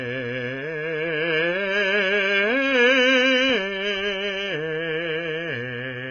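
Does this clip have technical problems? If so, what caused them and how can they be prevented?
Yes: AAC compression damage runs throughout the music, with nothing above about 6.5 kHz. The dull, smeared tone and warbling, fizzy texture on sustained sounds likely come from AAC-LC at a very low bitrate, consistent with roughly 16 kbps, which starves the quantiser of bits. To prevent it, encode at 128 kbps or higher.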